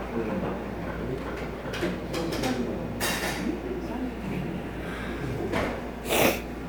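No technical faults are audible.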